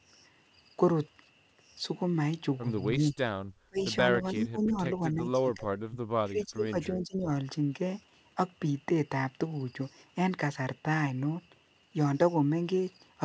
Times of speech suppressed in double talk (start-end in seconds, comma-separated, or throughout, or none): 3.11-3.16, 3.67-3.85, 4.21-5.99, 6.24-7.30